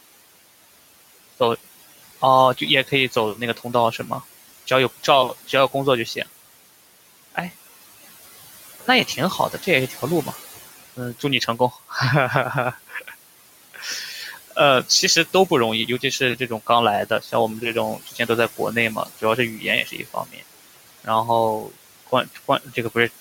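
Throughout the clip, the background noise drops away between phrases and swells back under them. These are noise suppressor artifacts: the suppressor pulls down bands it judges to be steady noise by about 15 dB, frame by frame, so the room noise, which sits about 17 dB below the speech, pumps with the talking.

Quiet consonants and word endings sound swallowed or go faint at 2.57–4.11 s, 4.67–6.26 s, 8.86–10.34 s, 10.97–11.95 s, 12.72–13.14 s, 13.74–14.57 s, 15.33–20.43 s and 21.62–22.96 s. This is speech cut by the noise suppressor, which mistook soft speech for noise and lowered it by about 9 to 18 dB. Each stretch loses only a few brief moments, while the long span from 15.33 s loses around a second in total.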